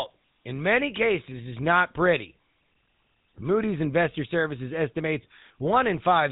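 GSM full-rate codec damage runs throughout this speech clip, giving it a buzzy, gravelly roughness. The codec models the vocal tract and excites it with sparse, regularly spaced pulses, running at about 13 kbps, and nothing survives above 3.8 kHz.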